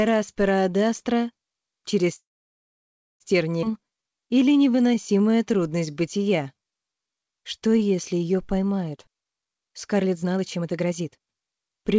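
This one's been through a call path, and you can hear it top out around 8 kHz, which fits G.722 at 64 kbps. From 2.16 to 3.22 s there's a call audio freeze: the sound trails off into near-silence for roughly a second, then carries on right where it stopped. That's likely packets stalling in transit until the jitter buffer ran dry, so a gap got inserted but nothing was lost. Shortly after, at 3.62 to 3.64 s, there's a skip ahead. Playback jumps forward almost seamlessly, but around 0.7 s of audio is simply gone, dropped while later packets were already queued, and the two sides are butted together. Then from 3.71 to 8.46 s comes a jitter buffer slow-down. Everything runs at about 87% speed with the pitch unchanged, drawn out and a bit stretchy, because the receiver kept repeating single pitch periods and pause fragments to rebuild its reserve, adding about 0.64 s in total. Finally, from 8.93 to 11.94 s, there's the opposite, a jitter buffer speed-up. 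The audio rushes along at about 133% speed at the same pitch, as the buffer trimmed short pitch-period chunks to burn off the backlog, shaving off about a second overall.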